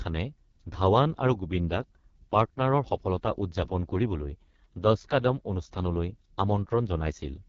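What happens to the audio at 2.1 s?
At 2.1 s the speech sounds rough, raspy and buzzy, with a hard ceiling near 7.3 kHz. This is the AMR wideband (HD Voice) codec running through the whole clip at heavy damage, which fits its lowest 6.6 kbit/s rate, too few bits to model the voice cleanly.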